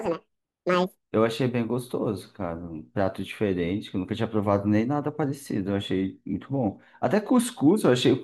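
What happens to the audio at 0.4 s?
At 0.4 s the speech falls inside a section at the wrong speed, running from 0.0 to 1.02 s. This opening second plays back at 1.78 times its recorded rate, so timing and pitch rise together: the voice sounds hurried and lifted by roughly ten semitones, giving a thin, chipmunk-like quality. The likely cause is that this portion was clocked against the wrong rate during editing or playback, before normal speed resumes just after 1 s.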